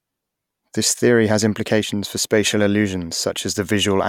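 Nothing in the recording stood out as a technical problem on listening.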